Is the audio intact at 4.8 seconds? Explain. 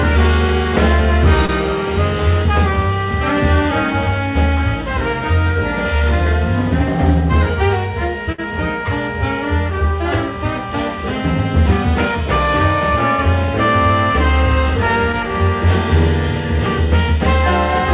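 Yes, the audio at 4.8 seconds is intact, carrying only the narrow-band sound of the call path, with nothing above about 4 kHz, which fits a G.711 A-law codec.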